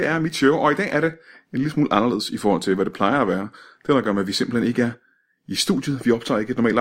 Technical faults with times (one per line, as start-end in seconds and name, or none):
1.13-5.77 clock drift buffer slips